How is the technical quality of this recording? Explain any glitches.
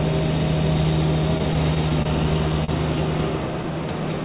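The recording has two timing faults from a call connection. The sound is band-limited to nothing above 4 kHz, which fits a narrowband call codec such as G.711 mu-law.

From 1.38 to 2.07 s there are repeated stalls (stutter). Packets kept arriving late, so the jitter buffer ran dry five times. The receiver extended the preceding sound to fill 71 ms in total, with the longest gap 27 ms, about a tenth of that span. Nothing is lost, but the sound hitches and drags. Unlike a single late packet, the holds recur in a cluster.

At 2.64 to 2.70 s there is a short stall from a late packet. One packet came due before it arrived, reflecting a 39 ms delay change. The receiver held the last sound for 39 ms, then resumed exactly where it left off. This is one isolated hold, not a repeating stutter.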